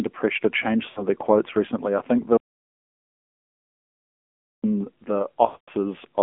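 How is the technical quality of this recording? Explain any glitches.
The quality is pretty rough, honestly: it's a mobile call with plainly audible codec damage, plus two dropouts.

Throughout, you're hearing the AMR narrowband mobile codec. The line only carries roughly 250 Hz to 3.5 kHz, and the vocal-tract model, fed with so few bits, leaves the speech buzzy and synthetic. That fits a low AMR-NB mode around 7.4 kbps.

Then there are lost AMR speech frames. From 0.90 to 1.06 s, between "pressure to change" and "their quotes recently I", about 60 ms drops out, which fits three failed frames. The decoder smears the last good pitch and tract settings with falling gain, so you get a brief warbly dip. From 5.46 to 5.70 s, a run of about 220 ms, which fits eleven frames, stretches out, fades to silence, and comes back rough.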